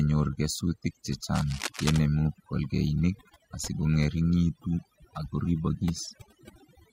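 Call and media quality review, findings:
Overdone noise removal, whole clip: background dropped and breaking up into twinkly specks. Denoiser set too hard, pulling bands near its noise estimate right down and taking quiet speech detail with them.

Cable scratch noise, 1.33–1.98 s: dense, uneven scratchy rustle over the speech, about 10 dB under it. Likely a worn cable or connector being moved, contact resistance jumping around.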